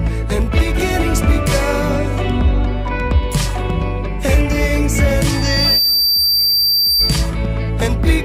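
From 5.30 to 7.30 s, loudspeaker feedback squeal: a 4.7 kHz loop tone swells over about half a second to roughly signal level, showing as one bright horizontal spectrogram line.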